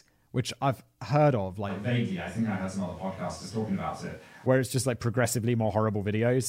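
The close microphone likely dropped out from 1.71 to 4.45 s, switching to a distant microphone: the speech turns suddenly roomy and hollow, thinner in bass, at similar level, with faint room noise.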